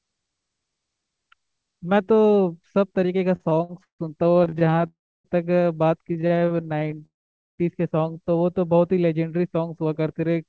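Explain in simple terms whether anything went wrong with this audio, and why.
Several things went wrong, all from sound reaching the listener unevenly over a call connection.

From 3.36 to 4.85 s there are repeated stalls (stutter): 19 hiccups, the longest 148 ms, where the last sound is stretched while waiting. Nothing is lost, but the audio drags. The same happens again from 6.08 to 7.02 s, with 14 shorter hiccups of at most 29 ms.

A call audio freeze follows each stutter, at 4.87 to 5.26 s and 7.05 to 7.60 s. This is one longer hold, not a string of short ones. Most of it is silence, 0.3 s and 0.48 s. The likely cause is delayed network packets.

A jitter buffer slow-down runs from 8.12 to 8.40 s. The sound plays at about 84% speed while keeping its pitch, drawn out rather than interrupted.

A jitter buffer speed-up runs from 9.85 to 10.47 s. The sound runs about 9% faster at the same pitch, trimming roughly 70 ms, so it feels hurried instead of stretched.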